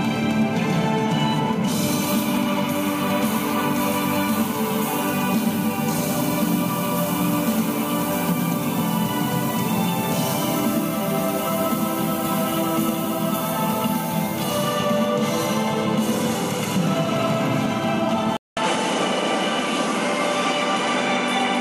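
At 18.37 s the audio drops out for 200 ms, then returns duller, with nothing above 11.4 kHz and a new noise floor roughly 30 dB down, at about the same level. The input was likely switched to a poorer device, which persists to the end.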